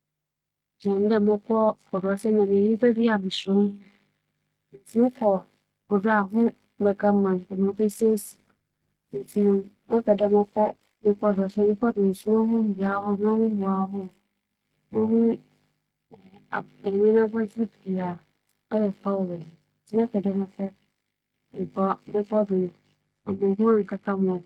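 At 7.73 s, a call bitrate drop sets in and lasts until 13.05 s. The speech turns rough and watery, and the top end dulls. This points to the encoder falling from around 32 kbps to about 13 kbps, coding coarsely and trimming high frequencies.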